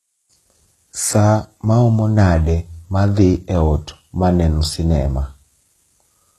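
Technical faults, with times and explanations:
Throughout: low-bitrate audio saved at a high bitrate. The speech stops dead above 12.3 kHz and keeps the swirly smearing of a very low-rate first encode, fitting roughly 16 kbit/s HE-AAC, likely re-saved as high-rate MP3. A plain low-pass filter wouldn't leave that smearing.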